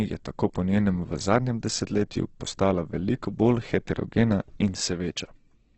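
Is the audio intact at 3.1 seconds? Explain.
No. At 3.1 seconds the speech carries heavy Opus compression damage, as it does throughout the clip. Nothing is present above about 8.1 kHz, so the top of the spectrum is gone. The likely cause is Opus in its music mode at a very low rate, which fits roughly 12 kbps. Short of bits, the encoder fills bands with folded copies of lower ones or with noise. Tones turn rough, grainy and noisy.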